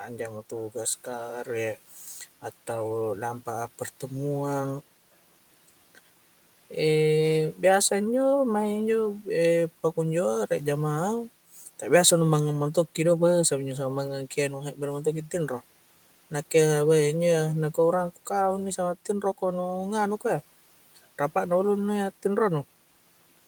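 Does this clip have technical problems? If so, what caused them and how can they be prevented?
Yes. From 20.86 to 20.98 s, just before "rapa' na", speech is cut by the noise suppressor, which mistook quiet speech for background and dropped it by about 12 dB. This shows as a brief waveform dip and a faded spectrogram patch. Gentler suppression settings would prevent it.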